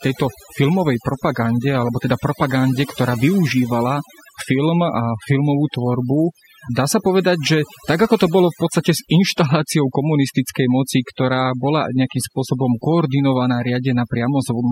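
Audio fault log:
Throughout, overdone noise removal: a denoiser set far too aggressively has pushed individual frequency bands down or off wherever they sat near its noise estimate, taking soft parts of the speech with them. The background drops and breaks up into twinkling specks. The specks set this apart from a plain noise gate, which only mutes the pauses.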